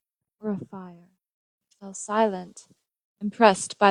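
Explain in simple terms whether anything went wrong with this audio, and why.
Nothing went wrong here; no faults can be heard.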